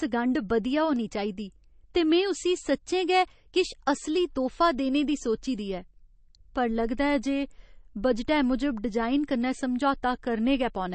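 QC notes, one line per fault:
throughout: MP3 compression. Plainly audible watery swirl with nothing above 8.3 kHz, likely a starved encoder (fitting 32 kbps) cutting treble and dropping weak lines.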